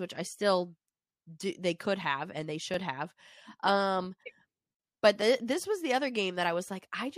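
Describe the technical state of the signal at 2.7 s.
At 2.74 s the speech drops into a block of digital silence. The gap lasts about 2.9 ms, which fits a 128-sample buffer left unfilled. The output buffer was likely not written in time, so zeros went out instead of audio. The signal cuts straight to silence and straight back, with no fade. At this length it is heard as a tick rather than a hole.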